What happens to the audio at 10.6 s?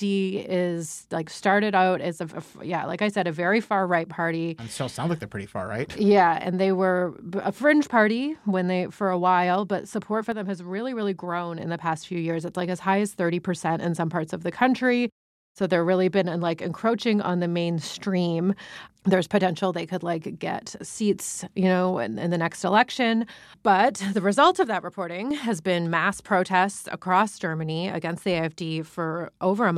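From 10.32 to 11.60 s, right after "while but support for", the speech drops abruptly by about 6 dB, likely one channel dropping out; unlike a fade, the level steps down and back up instantly.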